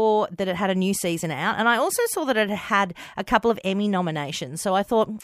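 No technical faults are audible.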